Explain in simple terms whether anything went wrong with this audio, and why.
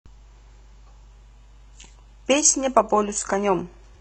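Adaptive stream at a lower bitrate, from 1.12 s to the end: the speech suddenly loses its crispness and takes on a thin, synthetic edge, with no gap. The connection slowed, so the player switched to a smaller, lower-quality version of the stream.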